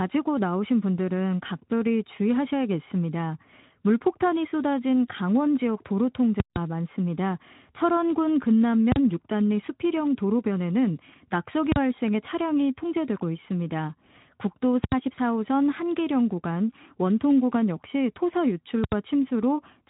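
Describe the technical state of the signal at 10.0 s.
At 10.0 s the speech is intact, with no fault, only the light coding of the Speex codec and the band-limiting that leaves nothing above about 3.9 kHz.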